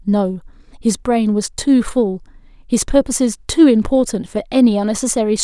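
No technical faults can be heard anywhere in the recording.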